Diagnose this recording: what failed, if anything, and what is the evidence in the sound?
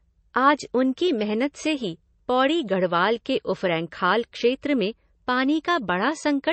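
Codec stage, likely MP3 compression: the speech has nothing above 8.3 kHz throughout, with plainly audible watery, warbling artefacts that a simple low-pass filter wouldn't produce, fitting about 32 kbps.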